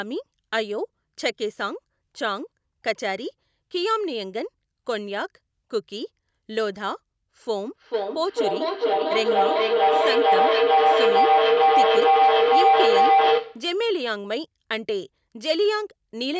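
Feedback howl runs from 7.74 to 13.79 s. Sound from a loudspeaker re-enters a microphone in the same room and returns louder on each pass, narrowing into a tone around 700 Hz with repeats about every 400 ms that peaks about 8 dB above the speech.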